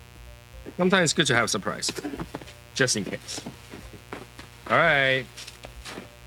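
A steady, raspy mains buzz sits under the audio for the whole clip, roughly 25 dB below the signal. It's built on 60 Hz, with sharp switching spikes from something like a dimmer, rectifier or unshielded run spraying harmonics up into the kilohertz range.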